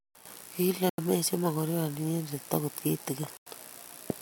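The speech cuts to silence at 0.90 s for 87 ms and at 3.37 s for 94 ms, then resumes. A Bluetooth stall, likely from interference emptying the headphone buffer, is the cause.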